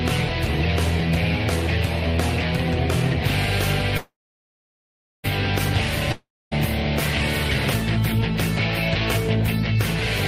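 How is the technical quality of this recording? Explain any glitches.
The recording has two interruptions, both of the kind heard on network calls.

From 3.97 to 5.26 s there is a call audio freeze. The last sound carries on as a fading buzz. It then drops to near silence for about 1.1 s. The likely cause is packets held up in transit, leaving the jitter buffer empty. When they arrive, the audio resumes exactly where it stopped. Nothing is lost, but everything after it now runs about 1.26 s late.

From 6.12 to 6.53 s there is a long network dropout. Again the last sound is stretched into a decaying hiss, then about 0.26 s of near silence. This time the audio does not pick up where it left off. It returns further on, so roughly 0.4 s of material is simply gone. The likely cause is audio that never reached the receiver at all.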